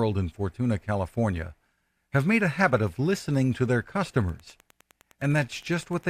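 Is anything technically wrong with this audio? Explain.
Yes: from 4.23 s, right after "of listening to their", there's Wi-Fi interference: a nearby radio's 102.4 ms beacon gets rectified, giving faint ticking about ten times a second.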